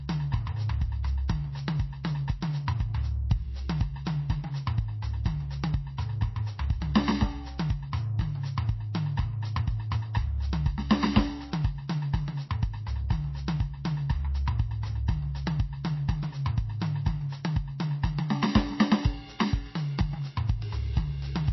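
This music clip carries plainly audible MP3 compression damage throughout. Nothing sounds above 5.8 kHz, and the remaining content has a watery, swirling texture as weak frequency lines drop in and out between frames. Both traits point to a very low bitrate, likely around 24 kbps. At 1.28 s, a pre-echo puts a brief hiss about 14 ms ahead of a sharp attack. The codec spread its quantisation noise across the whole block, so the quiet moment before the transient is filled and the attack itself sounds softened.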